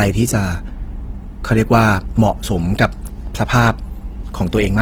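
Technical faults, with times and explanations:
Throughout, Opus compression: the speech sounds grainy and rough rather than swirly, with noisy, hashy texture sitting where clean tone should be, and the damage is easy to hear. That's likely Opus in its CELT music mode running short of bits, which fits a low rate around 16 kbps. It keeps each band's energy but fills the gaps with folded or noise content. The bandwidth stays full, reaching about 20.4 kHz, so it's not muffled.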